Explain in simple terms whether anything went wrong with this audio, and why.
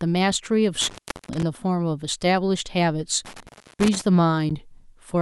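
A loose cable or plug briefly lost contact twice (intermittent contact), around 0.81 to 1.43 s and 3.25 to 4.01 s, dropping the speech for about a third of a second each time with crackle. At 4.50 s, a gap between stream segments, where two one-second chunks didn't line up, left a sharp 12-millisecond hole of silence.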